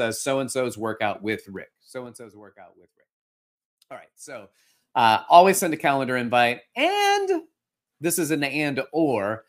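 Right after "and so's workout with", from 1.48 to 2.59 s, the speech drops by something like 20 dB in 3 dB jumps, about seven a second, with no smoothing, so you get zipper noise: a ticking that rides on the voice as it fades. It happens again from 4.31 to 4.83 s, just before "uh always send a", this time coming back up by about 20 dB and stepping faster, roughly fifteen ticks a second.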